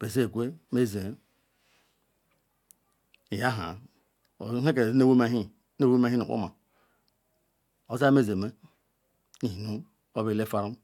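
No technical faults can be heard anywhere in the recording.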